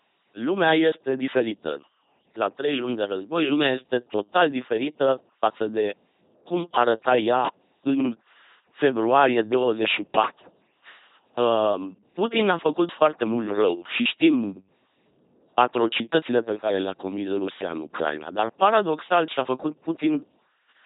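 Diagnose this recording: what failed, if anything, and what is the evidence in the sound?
Codec stage: throughout, the speech has the buzzing, robotic sound of an LPC-10 vocoder, with nothing above 3.9 kHz, consistent with 2.4 kbit/s pulse-or-noise excitation.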